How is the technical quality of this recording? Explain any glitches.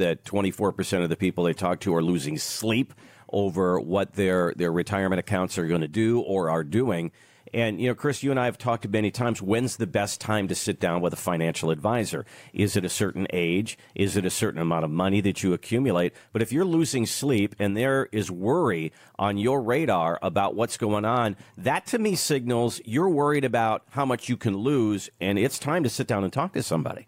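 No audible technical faults.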